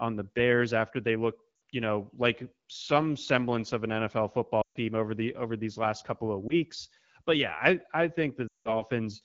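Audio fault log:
1.55 s, 4.62 s, 6.48 s, 8.48 s, lost AMR speech frames: gaps of 60, 140, 20 and 180 ms where the decoder repeats the last good pitch and vocal tract settings at falling gain. The brief one warbles, the longer ones drop to near silence within two frames before the speech resumes roughly.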